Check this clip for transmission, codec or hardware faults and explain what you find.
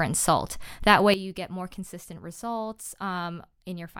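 One fault stands out: a sudden gain jump. At 1.14 s the speech abruptly drops by about 12 dB, background included, and stays low to the end. The likely cause is a digital gain change applied between adjacent samples with no ramp.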